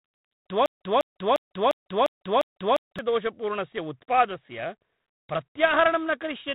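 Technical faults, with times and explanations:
Throughout, G.726 ADPCM: a harsh, rasping hiss rides on the speech and rises and falls with its level, and nothing passes above 3.9 kHz. Coding each sample as a coarse difference from a running prediction leaves this much noise, which fits 24 kbit/s.
0.66 to 2.99 s, broken-record loop: a 0.35 s fragment repeats exactly, back to back, seven times, and the speech that should have filled those 2.3 seconds is gone. The likely cause is a stalled player, encoder or stream resending the last piece it held.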